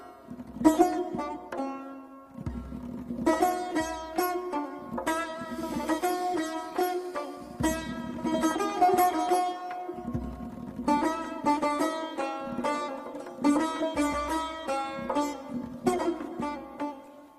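No technical faults occur at any point in this audio.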